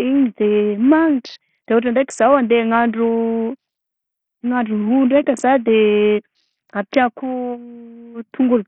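A speech clip carrying heavy Bluetooth SBC compression from start to finish: treble flickers in and out, with gritty noise and aliasing clinging to the sound. This points to a starved bit pool of around 48 kbps, likely from a low-bitrate Bluetooth link. A spectrogram would show patchy, blocky high bands that come and go.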